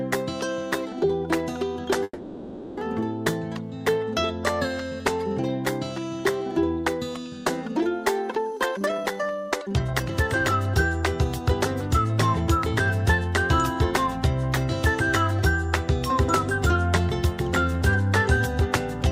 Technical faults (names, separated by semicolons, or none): call audio freeze; jitter buffer speed-up